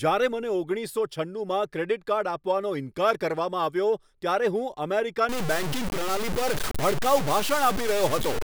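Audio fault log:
5.29–8.43 s: low bit depth without dither. From here to the end the speech turns harsh and grainy, with a gritty distortion that tracks the talker and changes as the sound changes. The quiet bits either sputter between a couple of coarse steps or drop straight to silence. The error sits only a few dB below the speech. The likely cause is a signal cut down to around 4 bits by truncation without dither.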